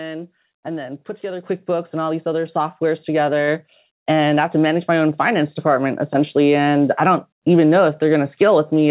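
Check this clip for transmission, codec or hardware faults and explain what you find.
Two sudden level jumps stand out in the speech, both from the microphone volume being stepped up. The band-limited sound, with nothing above 4 kHz, fits a 64 kbps G.711 mu-law WebRTC call path.

At 1.44 s, between "and then put together" and "and all these other", and again at 2.46 s, right after "and all these other", the call software raised the device's input gain in single steps: about 6 dB, then about 3 dB more. Voice and background noise rise together at once, which separates this from automatic gain control riding the voice level.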